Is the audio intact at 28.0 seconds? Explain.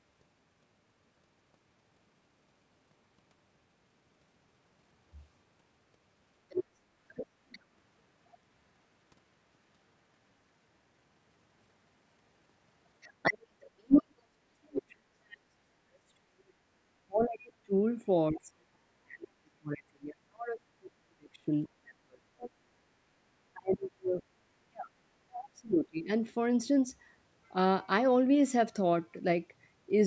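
Yes, the speech at 28.0 seconds is intact, with no fault at that moment.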